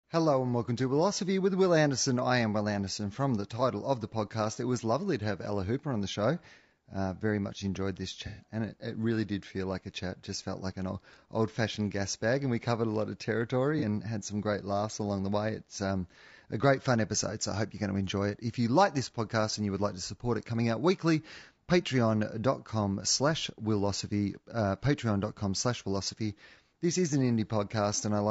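Rough, grainy speech runs through the whole recording, with a hiss filling the gaps between voice harmonics and a thin, synthetic-sounding top band. The likely cause is low-delay AAC compression (AAC-ELD) at a low rate, consistent with about 32 kbps, where the short frames resolve pitch poorly and starve the spectrum of bits. At 8.27 to 8.44 s a smeared, noisy, phasey patch replaces the voice, and a briefer blip of the same kind appears at 13.79 to 13.83 s. Both come from AAC frame loss with concealment: the decoder rebuilt the missing audio from the last good spectrum, roughly four frames' worth in the first gap and a single frame in the second.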